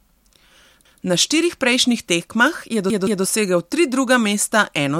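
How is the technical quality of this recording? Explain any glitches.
The recording has two audible stutters, both repeated buffers. From 0.85 to 1.02 s, a piece about 171 ms long plays once more, and from 2.90 to 3.24 s, the same-length piece plays twice more. The output device didn't receive fresh audio in time and replayed its last block, which fits an 8192-sample buffer. Each repeat starts with a hard join, so the speech audibly jumps back and restarts. No audio appears to be lost, only delayed.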